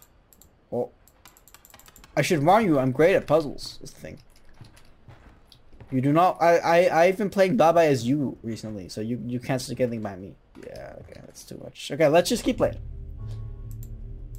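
Sample clock jitter runs through the whole clip: timing wobble of roughly 5 µs leaves a hiss sitting about 30 dB under the sound, showing on a spectrogram as a haze that tracks loud, bright passages and disappears in silences.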